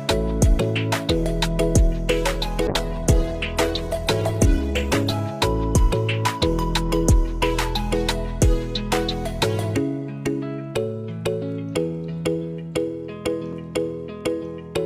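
The audio has two short discontinuities at 2.34 s and 13.53 s. Each is a point where the sound jumps ahead, with a few milliseconds missing at the first and only a millisecond or two at the second. The likely cause is a dropped buffer (overrun), where the capture side failed to collect samples before the hardware overwrote them, so the surrounding audio is spliced together with no gap. On a waveform each shows as an abrupt step in the trace. On a spectrogram each is a thin vertical line of broadband energy. Between 2.69 s and 5.27 s a call bitrate drop takes the encoder from 64 kbps down to 13 kbps, where it stays for about 2.5 s. At that rate the codec quantises coarsely and discards the upper band, so the sound turns muffled and watery until the bitrate recovers. On a spectrogram the high-frequency content disappears above a flat ceiling across that stretch, and the remaining energy looks smeared and blotchy before the full bandwidth returns.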